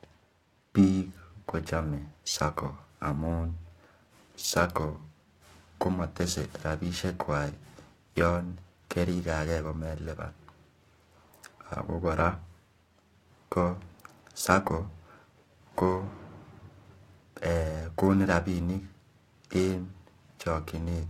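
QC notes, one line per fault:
throughout, periodic clock jitter: the converter clock is wobbling at around 1 kHz, so every component of the speech carries sidebands spaced about 1 kHz above and below it. The sibilants and upper harmonics suffer most, giving a rough, metallic edge that drops away in pauses.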